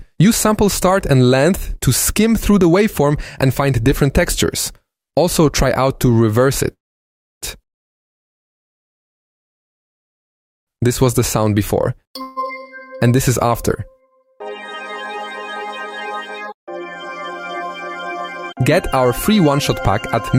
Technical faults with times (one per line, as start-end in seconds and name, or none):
0.35-5.03 sample clock jitter
6.73-7.44 call audio freeze
12.21-12.39 call audio freeze
18.53-19.91 jitter buffer speed-up